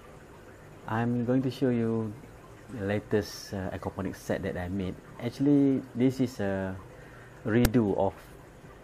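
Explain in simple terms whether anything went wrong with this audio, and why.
At 7.65 s the player read the file's text tags as if they were sound, a fault called file tags played as audio. It causes a brief, loud snap with hard edges.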